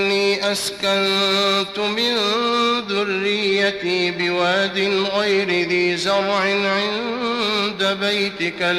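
Nothing in this audio stood out as a technical problem on listening.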